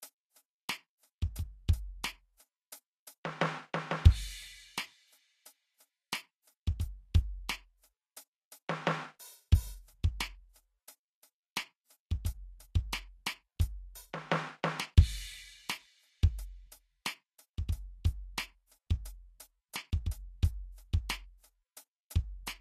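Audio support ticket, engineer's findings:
Likely low-bitrate Vorbis compression, whole clip. Coarse residue quantisation on the spectral floor turns treble detail into noise; band-limited, nothing above 14.1 kHz. Hissy, grainy top end, roughened tones, smeared attacks throughout the music. Plainly audible damage, consistent with roughly 28 kbps.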